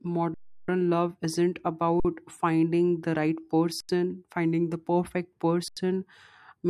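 Underrun with held sample at 0.34–0.68 s, 2.00–2.05 s after "love isn't", 3.80–3.89 s after "finding the right", and 5.68–5.77 s after "finding the perfect". Each time the output buffer emptied and the converter held its last value, so the sound freezes flat and then resumes softly where it stopped.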